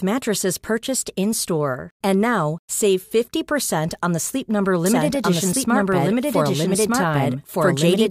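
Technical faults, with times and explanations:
4.86 s to end, doubled audio track: a dry copy of the speech cuts in abruptly, about a second behind and roughly as loud, likely from a slower second capture path.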